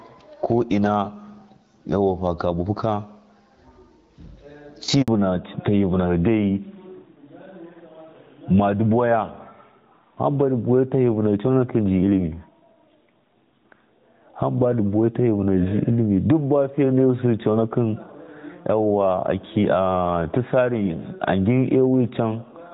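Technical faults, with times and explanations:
Throughout: gain pumping. The input gain is likely set far too high, so a fast limiter clamps down on every loud sound and then lets go, with levels swinging about 15 dB, leaving the speech squashed.
5.02 to 5.08 s: handover gap. The call switched between networks and no speech frames arrived during the changeover. The speech fades out within a few tens of milliseconds and a 60 ms silence follows until the new link delivers audio again.
5.08 s to the end: fallback to narrowband. After the handover the call dropped from HD Voice to an older narrowband codec, which fits a move from AMR-WB at 12.65 kbit/s to AMR-NB at 12.2 kbit/s. Nothing remains above 4 kHz, so the speech turns duller and rougher.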